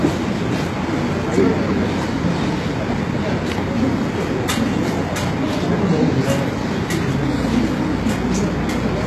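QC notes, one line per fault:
Throughout, HE-AAC compression. The damage is plainly audible across the whole clip. Nothing is left above 12.3 kHz. The treble below that sounds bright but false, gritty and metallic, as if copied from lower bands and not captured. Its harmonics do not sit in line with those beneath. This points to a likely low-rate HE-AAC encode, near 16 kbps, rebuilding the top end by spectral band replication.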